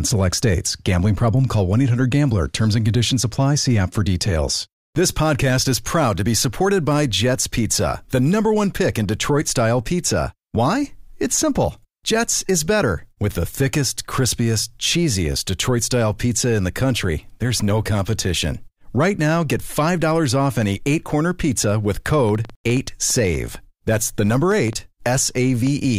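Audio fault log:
22.14–25.68 s, train of clicks: just after "eight corner pizza with", about fifteen similar pops arrive at roughly four per second, unevenly spaced and peaking about 5 dB above the speech, likely from interference, showing as thin broadband vertical lines on a spectrogram and sharp waveform spikes.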